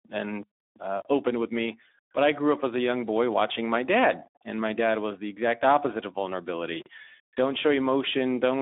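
Speex codec damage runs throughout: too few bits for the excitation leave the speech hoarse and noisy, which fits about 11 kbps, with a telephone band cut off above 3.8 kHz.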